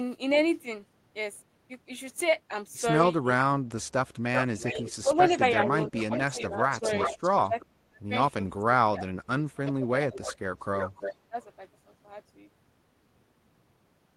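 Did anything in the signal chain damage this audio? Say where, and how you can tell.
Yes. Echo leak, in call processing: delayed copies appear at 4.34–4.77 s, 5.16–7.64 s and 10.15–11.44 s, 386 ms and 329 ms late. The likely cause is a far-end canceller passing loudspeaker pickup.

Speech suppressed in double talk, also in call processing: level drops at 4.72–6.88 s, 7.48–8.01 s, 8.59–10.3 s and 11.14–11.37 s, deepest about 40 dB. The canceller likely ducked its own talker along with the loudspeaker echo.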